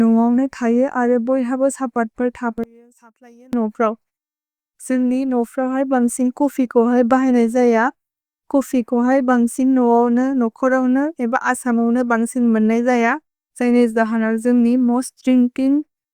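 From 2.64 to 3.53 s, the speech drops by about 28 dB and turns faint. The likely cause is one channel inverted. Reversed polarity on one side cancels the centred voice when both channels are summed, leaving only a faint residue.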